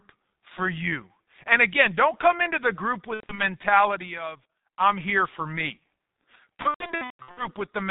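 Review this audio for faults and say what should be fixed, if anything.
The G.723.1 codec affects the whole clip: speech sounds muffled and hoarse, with smeared consonants, which fits its 6.3 kbit/s mode. It codes 30 ms frames from a slowly updated voice model and discards everything above 4 kHz. A spectrogram shows a hard ceiling near 4 kHz. To prevent this, use a wideband codec at a higher bitrate.

A loudspeaker feedback squeal runs from 2.06 to 5.01 s. The microphone picks up its own loudspeaker, and the loop's gain exceeds one at 4.1 kHz, so that tone swells over roughly two seconds until it sits around 10 dB above the speech. A spectrogram shows one bright horizontal line at 4.1 kHz. To prevent this, lower the monitor gain, separate the microphone from the speaker, or notch that frequency.

VoIP packet loss concealed by the speech codec occurs from 3.14 to 3.40 s, where 150 ms of audio is missing with a longest gap of 90 ms, and from 6.56 to 7.52 s, where 540 ms is missing with a longest gap of 150 ms. 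The decoder extends its last pitch and filter, so the sound turns buzzy and fading. A waveform shows a shrinking envelope, and a spectrogram shows frozen, smeared harmonics. To prevent this, improve the network path and add forward error correction or a deeper jitter buffer.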